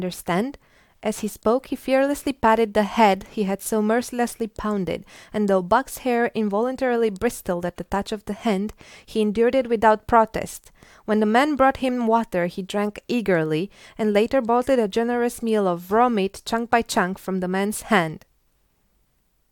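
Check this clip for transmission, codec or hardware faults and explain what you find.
No faults turned up anywhere in the speech here.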